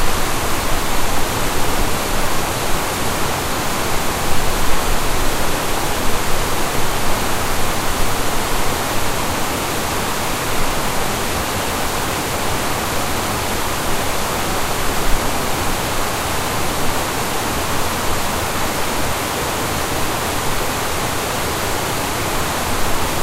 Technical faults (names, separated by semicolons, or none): repeated buffer